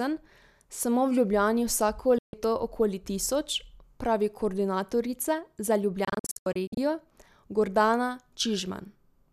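From 2.18 to 2.34 s and from 6.05 to 6.78 s, digital broadcast dropout mutes the speech as failed frames go silent. The first is one brief hole. The second is a cluster of short gaps, none longer than 72 ms. On a spectrogram both appear as blank vertical bands, and the waveform drops to silence with fast fade edges.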